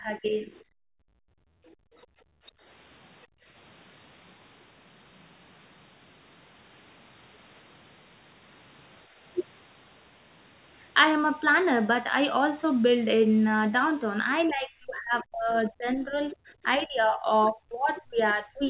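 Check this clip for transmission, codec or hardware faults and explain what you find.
Yes, there are faults. They all come from echo cancellation during a call. The whole clip is band-limited to 4 kHz, which fits the narrowband G.711 A-law codec the call path used.

Speech suppressed in double talk occurs from 0.0 to 0.51 s, 14.41 to 17.29 s, and 17.51 s to the end. The speech dips and fades, first by about 10 dB and later by about 30 to 35 dB. The likely cause is the echo canceller treating overlapping talk as echo and turning it down.

The other side's voice is leaking through at 0.52 to 0.62 s, 1.66 to 1.76 s, and 17.96 to 18.01 s. These are faint, brief scraps, about 20 to 35 dB below the main speech. Most likely, the canceller left some loudspeaker playback in the microphone signal.

Background is gated by the echo canceller from 0.79 to 2.63 s and from 3.26 to 3.46 s. The room sound drops away, by about 37 dB and then about 29 dB. 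The canceller clamped the microphone while the loudspeaker played and released it afterwards.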